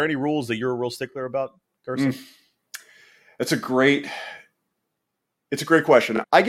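Overlapping chunks stutter the speech at 1.12 to 1.14 s, just after "that you're a real", then at 3.64 to 3.67 s and 6.17 to 6.19 s. The audio was handled in 2.5 s chunks, each starting about 23 ms before the previous one ended, so that sliver plays twice at every join. Unlike a dropout, nothing goes missing; a short fragment repeats, and the strictly even spacing sets it apart from random glitches.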